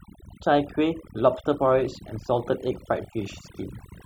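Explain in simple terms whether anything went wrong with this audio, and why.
Something did go wrong, and it runs through the whole clip: overdone noise removal. A cleanup tool was pushed too hard on a noisy recording. It shuts down any slice of the sound that looks like background noise, and the softer parts of the speech get caught up and removed too. That's why the gaps fall to near silence with little twinkling specks.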